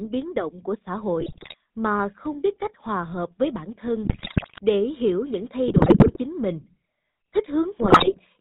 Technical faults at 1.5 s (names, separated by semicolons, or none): GSM full-rate codec; GSM bit errors